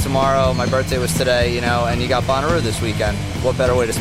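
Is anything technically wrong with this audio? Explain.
No, nothing is technically wrong with this audio.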